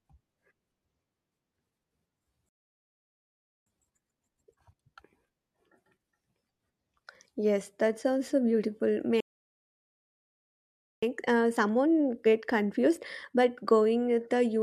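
At 2.49 s the speech halts for about 1.2 s. This playback stall was likely caused by the player running out of data, and it leaves a flat, empty stretch in the waveform. From 3.67 to 4.83 s, time-compressed catch-up rushes the backlog at 2× speed. Pitch stays normal. On the spectrogram the harmonic spacing is unchanged but the syllables are squeezed together. A second stall, from 9.20 to 11.03 s and lasting about 1.8 s, is again likely due to starved buffering and shows as a blank vertical band. Catch-up follows from 11.03 to 14.03 s at a gentler 1.1×, sounding only faintly hurried.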